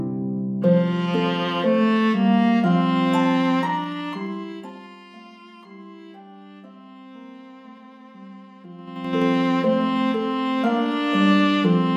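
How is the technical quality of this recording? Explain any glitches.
The recording has audible zipper noise during two level changes. From 3.67 to 5.04 s, a ticking rides on the sound as it drops about 20 dB in 1 dB steps. From 8.79 to 9.22 s, coarser 4 dB steps click as it rises about 20 dB. In both, the gain jumps about ten times a second without smoothing, and each jump clicks.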